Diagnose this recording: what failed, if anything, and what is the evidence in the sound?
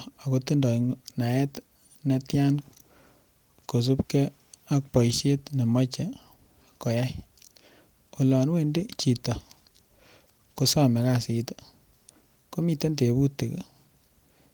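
Nothing has failed in this speech recording: it has been through Opus voice compression in hybrid mode at 24 kbps with the full audio band kept, reaching up to 20.4 kHz, and no stage in the chain shows any breakdown.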